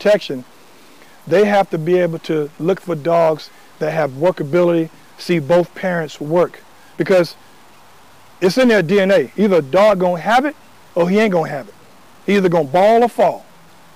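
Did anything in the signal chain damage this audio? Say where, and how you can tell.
Yes, throughout the clip there is low bit depth without dither, likely from a sample-format conversion that truncated the samples. Grainy distortion tracks the sound and sits roughly 35 dB below it, which fits about 7 bits. On a waveform, quiet passages show visible stair-steps, and the spectrogram shows signal-dependent noise with no steady floor.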